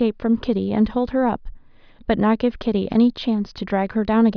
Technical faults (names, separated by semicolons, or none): none